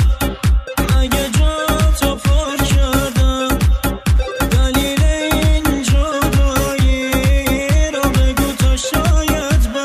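From 1.06 s to the end, computer activity noise buzzes underneath. It pulses at around 150 times per second, roughly 30 dB below the sound. Processor or graphics load is disturbing the shared ground. The buzz follows that activity, not the audio.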